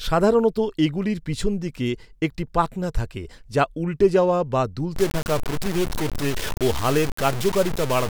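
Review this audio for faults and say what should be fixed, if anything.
Two sharp clicks occur at 1.33 s and 2.84 s. Each is a single thin click with no sound lost. This is likely dropped samples, about a tenth of a millisecond, where the waveform jumps to a later value. Keep buffers from underrunning so no samples are skipped.

From 4.96 s to the end, the speech turns grainy and gritty. The grit follows the voice, and quiet stretches sputter. This is likely low bit depth without dither, consistent with about 4 bits truncated. The error sits only about 10 dB below the signal. Keep full resolution and add dither whenever bit depth must be reduced.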